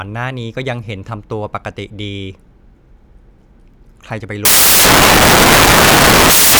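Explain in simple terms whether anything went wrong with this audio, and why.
From 4.45 s until the end of the speech at 6.60 s, the sound turns into loud, harsh noise. This is a case of samples built from the wrong bytes: the player assembled each sound value from its pieces wrongly, so the tiny, fast-changing details became the biggest part. Unlike ordinary background hiss, which sits quietly underneath speech, this noise is loud.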